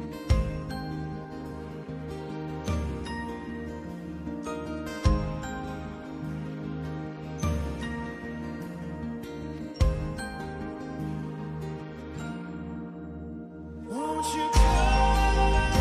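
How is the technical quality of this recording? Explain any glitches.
The technical quality of this recording is good, and there are no glitches to explain.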